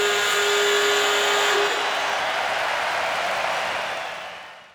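Nothing in this recording of sounds stands out as a technical fault, so there's nothing here to pin to a time or trace back to a cause.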